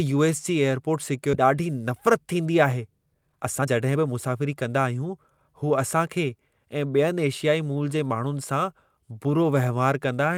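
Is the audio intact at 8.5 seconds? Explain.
Yes, at 8.5 seconds the speech plays through cleanly, with no dropout, click, distortion or other fault audible at that moment.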